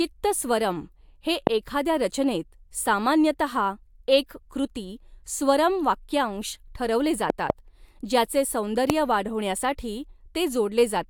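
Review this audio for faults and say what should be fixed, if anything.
Loud pops occur at 1.47–1.49 s, just before "एखाद्या रचनेत"; at 7.30–7.52 s, a double pop after "वाक्यांश ठरवले"; and at 8.90–8.92 s. Each peaks roughly 20 dB above the speech. These are likely voltage pulses from a plug, switch or static, added on top of the signal. Unlike a dropout, the speech carries on underneath each one. To prevent them, mute the signal path before plugging or switching, and keep connectors secure and grounded against static.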